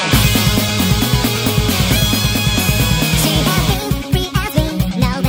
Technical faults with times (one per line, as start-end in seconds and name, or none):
0.00-5.28 wrong sample rate